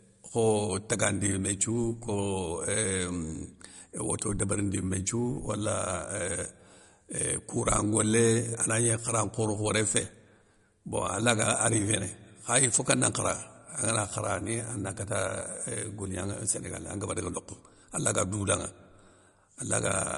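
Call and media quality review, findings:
Speech sounds watery and swirly throughout, nothing above 11.2 kHz; likely MP3 compression at a low bitrate, around 48 kbps, starving weak frequency lines and cutting treble.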